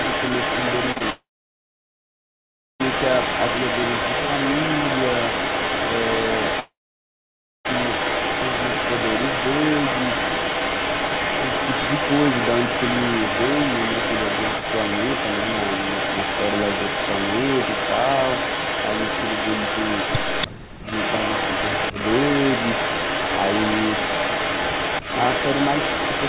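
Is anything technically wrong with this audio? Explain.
Yes. The speech carries a persistent echo, two brief concealed packet losses, two long network dropouts and two moments where the talker is ducked during double talk, all heard through the narrow band of a G.711 call path that stops at about 4 kHz.

Echo leak runs from 0.00 to 20.48 s and again from 20.85 to 26.29 s. A distinct copy of the speech trails it by 286 ms at roughly the same level. This most likely comes from a far end on a loudspeaker whose echo canceller let its microphone pickup through and sent it back. Unlike room reverberation, it is a separate, recognisable repeat at a fixed lag rather than a smooth decaying tail.

Short concealed packet loss occurs twice in quick succession, from 0.92 to 0.98 s and from 0.98 to 1.02 s. The receiver bridged roughly 38 ms and then 23 ms of missing audio by extending the preceding sound before blending back. 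The result is a brief smear or wobble lasting only hundredths of a second. The audio keeps flowing around it, which separates it from the dropouts that follow.

Long network dropout hits from 1.10 to 2.82 s and from 6.60 to 7.67 s. These are most likely stretches where no packets arrived. Each begins with a short buzzy or hissy continuation that fades, then goes quiet for about 1.56 s and about 0.93 s respectively. The speech resumes further on with that portion simply gone. The fading synthetic tail and the skipped content distinguish this from suppression.

Speech suppressed in double talk appears from 20.47 to 20.89 s, about 0.3 s in total, dropping by roughly 40 dB at its deepest. A milder 50 ms dip of about 10 dB follows at 21.92 to 21.97 s. When both sides overlapped, the echo canceller likely ducked the talker along with the echo. The speech is turned down or clipped in pieces but not skipped, and there is no fading fill.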